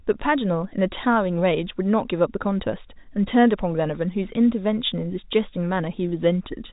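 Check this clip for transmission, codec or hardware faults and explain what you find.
Nothing stood out on listening, with the speech carried by G.711 telephone coding, which keeps it within a band that ends around 3.8 kHz.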